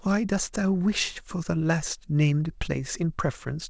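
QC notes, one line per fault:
No faults found; the speech comes over a wideband call path with nothing above 8 kHz, consistent with G.722.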